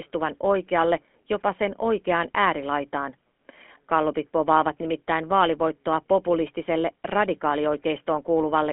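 GSM full-rate codec damage runs throughout. Nothing passes above 3.8 kHz. Sparse pulse excitation makes the speech plainly buzzy and gravelly, consistent with 13 kbps.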